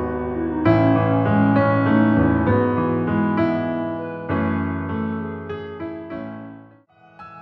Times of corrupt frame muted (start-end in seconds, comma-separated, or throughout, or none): none